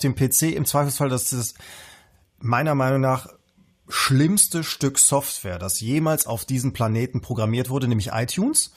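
Nothing in this bit of speech needs pointing out, since no technical faults turn up anywhere along the way.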